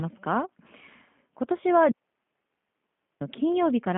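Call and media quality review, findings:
G.729 codec damage throughout. Rough, slightly synthetic speech. Nothing above 3.5 kHz; line band about 150 Hz to 3.4 kHz. Consistent with an 8 kbit/s G.729A leg. The model-based coder rebuilds speech from filter, pitch and pulses.

Digital wireless dropout, 1.91 to 3.21 s. Clean 1.3 s hole of near silence. No noise burst either side. Wireless receiver lost too much data and muted with a very short fade.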